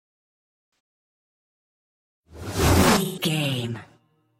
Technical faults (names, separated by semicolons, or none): AAC frame loss with concealment